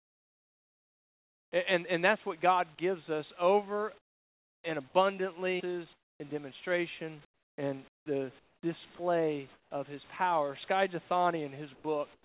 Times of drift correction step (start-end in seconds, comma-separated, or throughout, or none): none